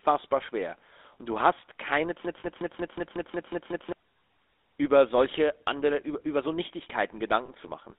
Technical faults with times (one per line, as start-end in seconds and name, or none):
0.00-7.98 GSM full-rate codec
2.25-3.92 broken-record loop
2.40-2.45 lost GSM frames
7.46-7.49 lost GSM frames